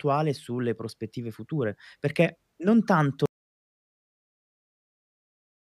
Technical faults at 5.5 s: audio dropout to silence

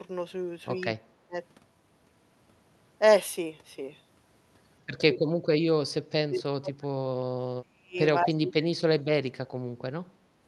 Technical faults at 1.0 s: speech suppressed in double talk

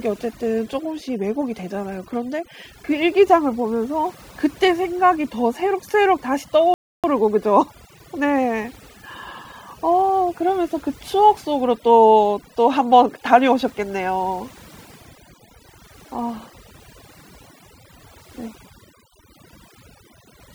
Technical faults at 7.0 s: overdone noise removal; playback stall

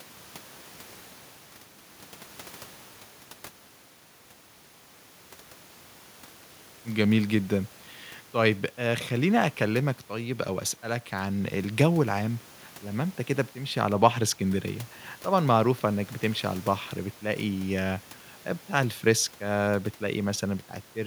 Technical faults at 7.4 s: none

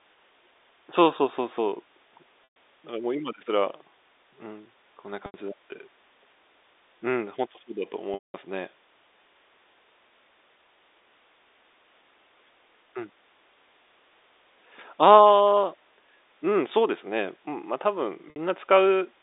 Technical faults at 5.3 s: packet loss with pitch repetition

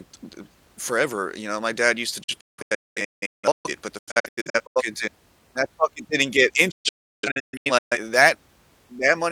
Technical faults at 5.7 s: none

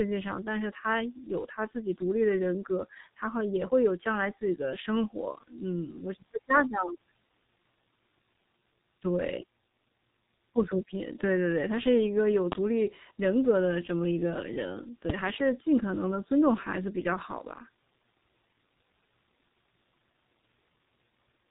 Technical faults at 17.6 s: G.723.1 codec

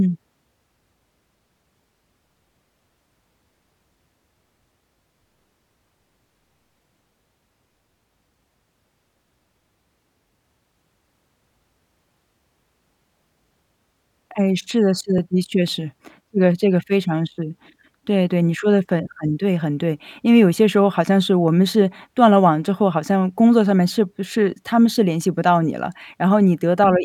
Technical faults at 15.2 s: block of digital silence

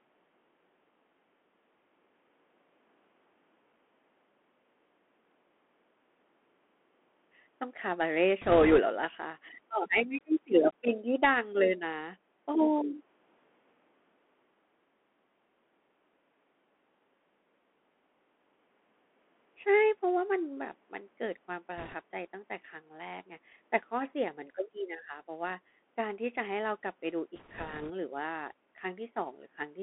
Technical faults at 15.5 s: Bluetooth CVSD headset codec

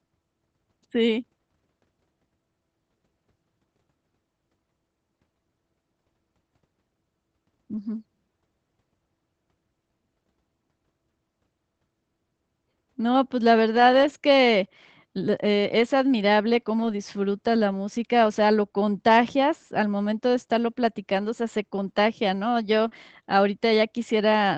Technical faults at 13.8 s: lost packet rebuilt from error correction

